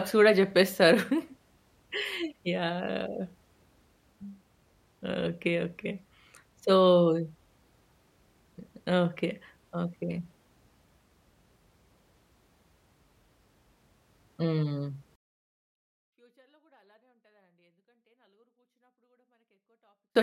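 Speech, with a 24-bit alignment error from 15.16 to 20.16 s: 24-bit samples in the low bytes of 32-bit words, read as 32-bit, drop about 48 dB. The waveform goes nearly flat and the spectrogram almost blank.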